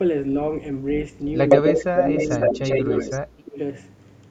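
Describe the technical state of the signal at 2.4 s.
At 2.4 s there is an echo leak, running from 1.49 to 3.2 s. A copy of the speech returns about 90 ms late. It is strong, even a little louder than the direct sound. The likely cause is a loudspeaker-side echo canceller failing to remove what its microphone picked up.

Just before, at 2.26 to 2.32 s, the speech was suppressed in double talk. It dips by roughly 10 dB for a brief moment. The canceller likely mistook the local talker for echo and turned both down.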